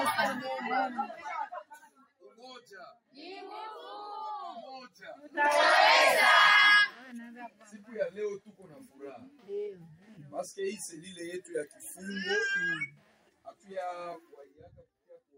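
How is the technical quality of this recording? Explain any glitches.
No glitches or technical faults can be heard anywhere in the recording.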